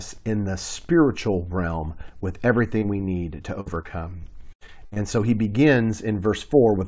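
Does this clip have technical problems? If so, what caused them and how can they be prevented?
Yes. At 2.78 to 2.84 s, right after "the spiritual realm with", and again at 2.98 to 3.01 s, just before "need to", there are brief smears. This is short concealed packet loss: roughly 40 ms and 20 ms of audio arrived too late, and the receiver bridged each hole by extending the preceding sound. A larger jitter buffer or forward error correction on the call would prevent it.

From 3.61 to 4.98 s, between "need to" and "so he", the sound turns choppy, with pieces missing. This is repeated packet loss, with eight gaps totalling about 300 ms, the longest 79 ms, so concealment fills about a fifth of that stretch. A more stable network path, with less congestion or a wired connection, plus redundancy or FEC, would prevent it.

The call path cuts everything above 8 kHz, which fits a wideband codec such as G.722.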